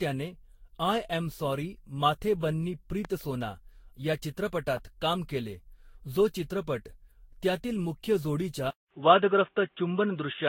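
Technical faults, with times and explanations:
Throughout, generation loss: the speech sounds swirly, smeared and hollow, with blurred consonant attacks and nothing above 16.6 kHz. This is more damage than one lossy encode at this rate would leave, which points to the likely cause: around seven successive Vorbis passes, each re-quantising on a shifted frame grid.
3.05 s and 4.77 s, loud pop: a single sharp pop about 10 dB above the speech, the first just after "अॅम सॉरी माथे बन्नी", the second just before "काम केले". The speech continues unbroken underneath, unlike a dropout. The likely cause is a brief electrical voltage pulse added to the signal.
8.70 s to the end, input switched to a poorer device: after a gap of about 200 ms of silence, the sound turns dull and boxy, with nothing above 3.8 kHz. The level shifts by about 5 dB and a new noise floor appears about 45 dB down. The gap, the level step and the new noise set this apart from a filter, and point to a likely change to a narrower-band microphone.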